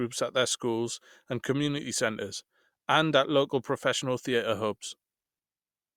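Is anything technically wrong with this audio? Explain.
No, nothing technically wrong can be heard anywhere in this speech recording.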